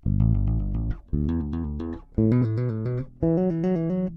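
At 2.40 s a few compressed frames are skipped: they were missing from the stream or rejected by the decoder as damaged, so the audio jumps ahead by roughly 10 ms, leaving a brief discontinuity where the material on either side of the gap is joined directly.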